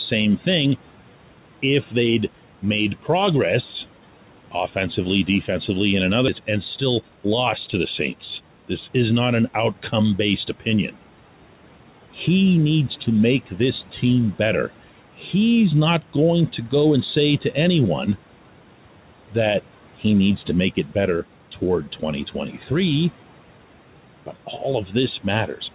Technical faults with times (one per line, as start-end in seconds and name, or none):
0.00-25.75 noise suppressor artifacts
6.28 skip ahead
6.39-8.50 jitter buffer speed-up